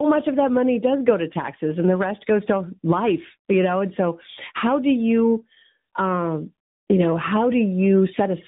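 From start to finish, the speech shows tandem speech coding. It passed through two speech coders in a row, with each one decoding and re-encoding the previous one's damaged output. The roughness and warble sound like a low-rate coder such as AMR-NB stacked after a delta-modulation stage like CVSD. Nothing reaches above 3.8 kHz, so the speech sounds muffled. The speech has a gritty, watery wobble that is stronger than either coder would leave alone.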